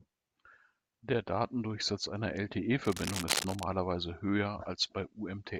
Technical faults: cable scratch noise

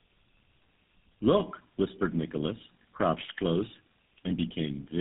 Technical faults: tandem speech coding

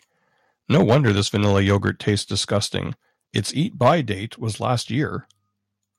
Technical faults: microphone overload; microphone volume stepped down

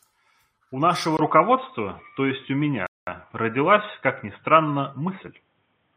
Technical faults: input switched to a poorer device; rebuffering stall

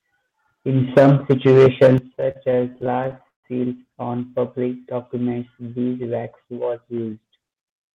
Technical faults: microphone overload; microphone volume stepped down; repeated stalls (stutter); jitter buffer speed-up

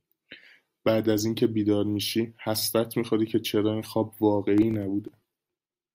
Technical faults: processor overload crackle

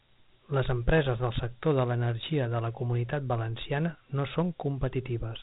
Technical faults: Dialogic VOX ADPCM

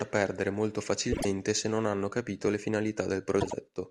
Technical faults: frames out of order

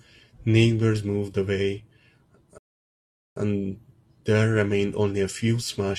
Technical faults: rebuffering stall

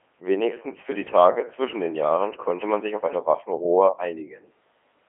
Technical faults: Codec 2 vocoder

